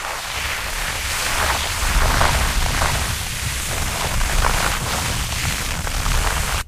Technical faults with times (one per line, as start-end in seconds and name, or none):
0.76-4.72 doubled audio track